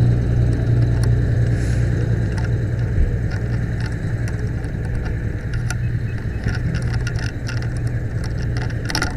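No technical faults can be heard anywhere in the audio.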